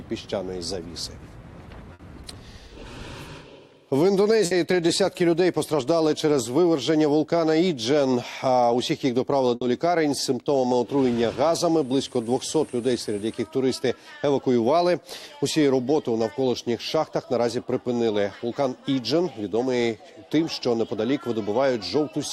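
At 1.93, 4.45 and 9.55 s you get a burst of packet loss: about 60 ms is lost, the receiver stretches the last sound into a fading buzz or hiss, then the audio picks up further on with that stretch gone.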